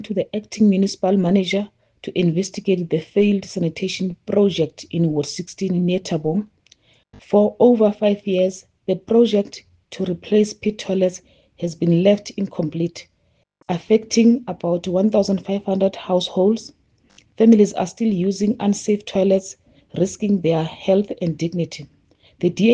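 No dropouts, clipping, distortion or timing faults turn up anywhere in the recording.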